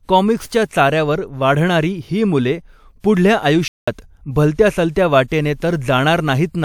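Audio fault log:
0.65, 3.00, 4.54, 4.91 and 5.28 s, pre-echo: before each sharp speech onset, a short hiss runs for 40 to 58 ms as block-wide quantisation noise fills the quiet gap. The attacks sound smeared. On a spectrogram, a thin broadband smear sits just ahead of each onset.
3.68 to 3.88 s, playback stall: the speech cuts to silence for 195 ms mid-flow, then resumes, likely because the player ran short of data or its thread was blocked. The waveform shows a flat silent gap, and the spectrogram shows a blank vertical band.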